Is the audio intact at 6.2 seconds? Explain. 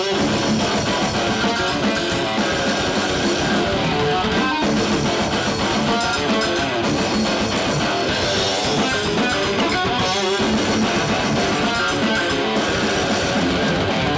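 Yes, the audio is intact at 6.2 seconds, with nothing there beyond the normal sound of the call path, whose content stops at about 8 kHz.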